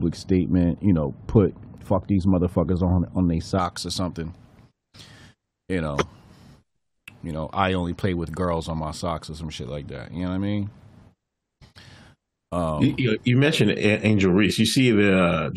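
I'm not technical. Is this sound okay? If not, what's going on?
No. For the first 3.6 seconds, up to "or something", de-emphasis applied wrongly: a treble-cutting step meant to reverse a boost was used on audio that never had one, or was used twice. The high end is pulled down, so the speech sounds dull and muffled.

At 14.5 seconds there's damaged data in a compressed stream. Part of the file was corrupted, so the player lost its place and had to find the next readable chunk. You hear a brief chirp or blip.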